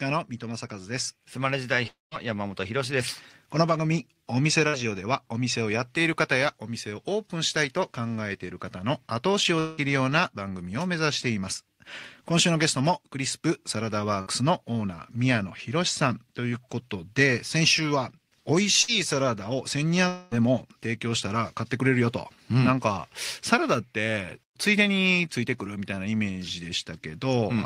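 At 1.87 to 2.14 s the speech breaks off in a long network dropout, likely caused by a stretch of audio never arriving. About 240 ms is missing. A fading fill continues the last sound, and then about 170 ms of silence shows as a flat waveform and an empty spectrogram column.

Bursts of packet loss follow at 4.68, 14.21 and 18.82 s. Each removes about 60 ms, concealed by roughly 50 ms of fill that continues the last sound and fades. On a spectrogram this appears as a frozen, smeared stretch.

Further dropouts at 9.59 s (about 180 ms lost) and 20.08 s (about 240 ms) are concealed to the end, with the fading fill running straight into the resumed speech.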